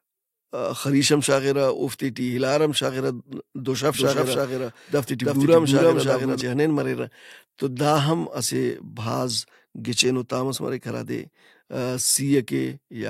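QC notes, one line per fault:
3.95–6.41 s, doubled audio track: just after "ہم شاغرہ دُشف" a second full-band copy of the speech enters abruptly at roughly the same level, trailing by around 300 ms, then cuts off just as sharply. It has no decay or room colour, so it sounds like a flat echo rather than reverberation, likely from a slower capture path recording the signal twice. On a spectrogram, syllable patterns repeat side by side at a fixed offset, and the waveform envelope doubles with hard edges at both ends.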